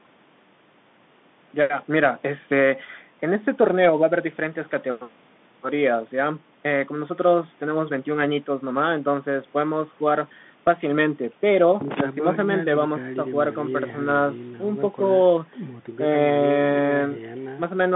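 Throughout, Bluetooth CVSD headset codec damage confines the speech to 150 Hz to 3.6 kHz, a hard spectrogram ceiling, with scratchy s sounds over granular hiss, consistent with a 64 kbps link.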